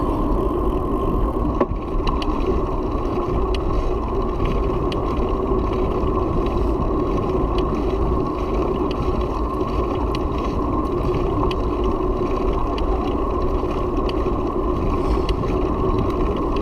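Listening through, nothing in the audio stood out as a technical fault.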